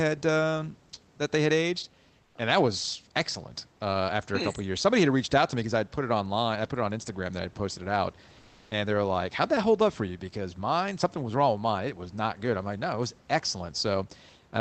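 At 2.23 s, after "that they had aged", the room background drops out for 120 ms and is replaced by comfort noise in place of the background: a smooth, featureless hiss about 2 dB quieter, until "and that was excellent". At 8.41 s, after "I'd posted it out", a 300 ms gap behaves the same way, about 1 dB louder, before "and they're like". The likely cause is Opus discontinuous transmission synthesising noise at the receiver during pauses, heard over a call path band-limited at 8 kHz.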